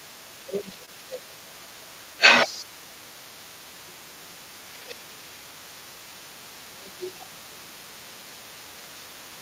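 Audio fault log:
Throughout: other side's voice leaking through. A second voice sits under the main talker for the whole clip, about 10 dB below it. The likely cause is the talker's own loudspeaker, playing the other side, feeding back into the microphone, with the echo canceller leaving a residue.
0.45–1.42 s, 1.59–1.77 s, 1.95–2.15 s, 2.93–3.22 s, 3.67–5.30 s, 6.15–6.41 s, 6.67–7.98 s: speech suppressed in double talk. The main voice dips by about 5 to 15 dB in these stretches, deepest near 7 s. When both sides talk at once, the canceller likely cannot separate the talker from the echo and turns everything down.
0.85–0.89 s: short concealed packet loss. A brief smear replaces the sound here, where about 20 ms of audio never arrived in time. The receiver filled roughly 18 ms of the gap by continuing the preceding sound, then blended back into the real signal.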